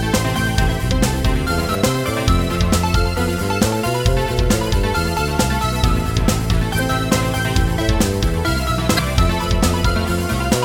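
Damaged data in a compressed stream appears three times, at 1.71 to 1.76 s, 6.75 to 6.80 s and 8.95 to 8.99 s, each burst lasting about 44 ms. In each spot, corrupted bytes in the encoded stream leave the decoder unable to read the affected frames properly. It loses sync and searches for the next valid frame header, and that brief misreading comes through as a short chirp or squawk that interrupts the sound.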